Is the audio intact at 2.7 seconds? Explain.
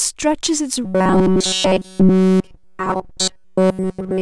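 No. At 2.7 s the speech is in the middle of robotic sound from repeated short buffers, running from 0.84 s to the end. It is likely caused by a buffer of about 5.3 ms being replayed in place of nearly all the new audio, which forces a rigid, metallic 188 Hz buzz.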